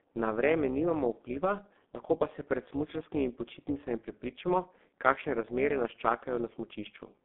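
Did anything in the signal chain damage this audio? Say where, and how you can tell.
Yes. At the codec stage, the whole recording passes through G.723.1. Nothing survives above 3.5 kHz, the band sits between 200 Hz and 3.5 kHz, and consonants smear into a hoarse, muffled blur, which fits a roughly 6 kbit/s coder. On a spectrogram, the energy stops at a hard ceiling throughout.

The second fault is overlap-add ripple, introduced in processing that splits the speech into frames and rejoins them with mismatched windows. The level swells and dips by about 6 dB, around 200 times a second, giving a metallic buzz. On the waveform, the envelope shows a regular scalloped modulation throughout.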